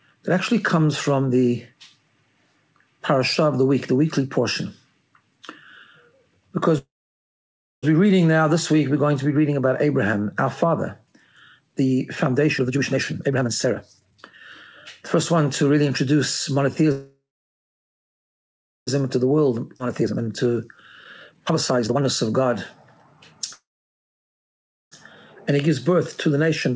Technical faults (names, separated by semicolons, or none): call audio freeze; jitter buffer speed-up; skip ahead